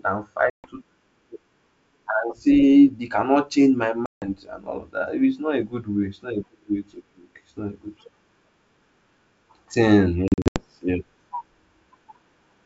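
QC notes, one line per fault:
0.50–0.68 s, 4.06–4.28 s, 10.28–10.65 s, packet loss on an ADPCM call: hard silent gaps (140, 160, scattered 200 ms), then slightly distorted speech as the G.722 decoder's predictor and step size resynchronise.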